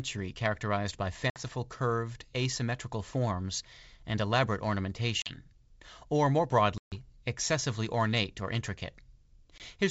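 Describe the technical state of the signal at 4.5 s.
At 4.5 s the speech is intact, carried cleanly through G.722 wideband telephone coding at 64 kbit/s with no audible fault.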